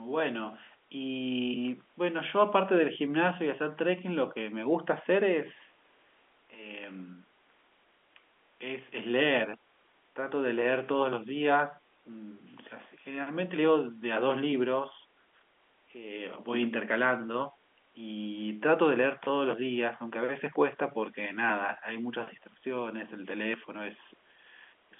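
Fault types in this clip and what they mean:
Nothing here counts as a fault: it's ordinary telephone-line speech, with the sound topping out around 3.8 kHz just as a landline call would.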